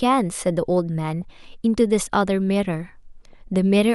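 At 1.22 s the speech picks up a brief burst of DAB burbling. It returns from 3.25 to 3.33 s as a longer run of burbling. Weak reception let bit errors slip past the error correction into the MP2 audio data, at roughly 0.15 and 0.1 percent. Corrupted samples put short blips of noise in single sub-bands, and corrupted scale factors make sub-bands jump in level for up to a frame. The second burst sounds like it spans a dozen or so frames.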